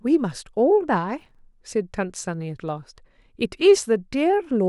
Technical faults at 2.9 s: none

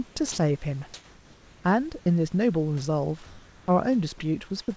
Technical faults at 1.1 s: comfort noise in place of the background

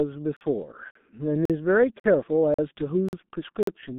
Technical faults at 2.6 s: G.723.1 codec; gap between chunks

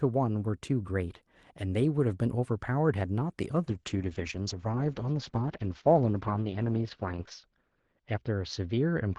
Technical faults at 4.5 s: call bitrate drop

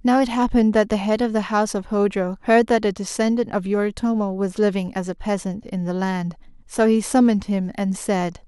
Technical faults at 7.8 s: none

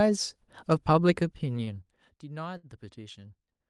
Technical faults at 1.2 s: zipper noise

